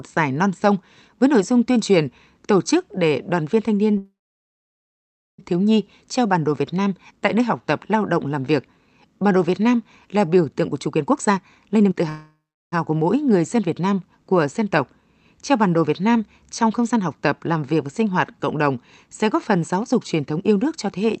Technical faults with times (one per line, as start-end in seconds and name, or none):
3.97-5.40 call audio freeze
10.60-12.02 jitter buffer speed-up
12.09-12.74 call audio freeze
16.62-17.73 jitter buffer speed-up
19.74-21.05 jitter buffer speed-up